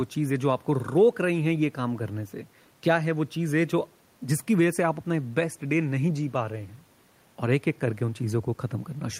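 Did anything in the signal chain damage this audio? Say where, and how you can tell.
No, nothing along the chain has damaged this speech signal, and the only other sound is the microphone's own room noise, sitting about 37 dB below the speech as part of the original recording.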